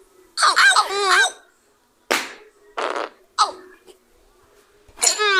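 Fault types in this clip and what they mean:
No faults can be heard anywhere in the clip.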